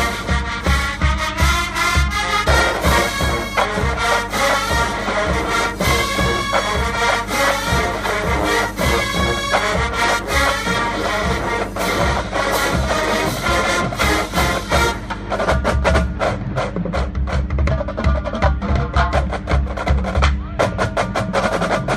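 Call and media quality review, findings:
Mains hum, whole clip: steady 50 Hz tone with low harmonics, pretty prominent, roughly 10 dB under the signal. Probable cause is a ground loop or a nearby transformer leaking the power line into the analogue path. Check cabling and grounding first.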